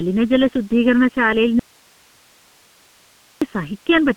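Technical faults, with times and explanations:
Throughout, channel delay (comb filtering): one channel lags the other by under a millisecond before a mono sum, carving evenly spaced notches from around 700 Hz upward, so the speech sounds hollow and phasey.
Throughout, G.723.1 codec: heavy coding at 6.3 kbit/s over a 150 Hz to 3.4 kHz line leaves nothing above 3.8 kHz, making speech muffled and hoarse, with smeared consonants.
1.59 to 3.42 s, audio dropout to a faint residue: the speech cuts off abruptly for 1.82 s, leaving only hiss about 35 dB down, likely because the signal was lost while the downstream path stayed live.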